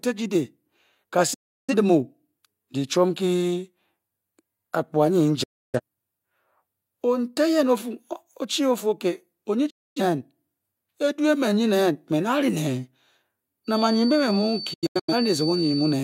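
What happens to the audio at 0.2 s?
Nothing goes wrong at 0.2 s; the audio is intact at that moment.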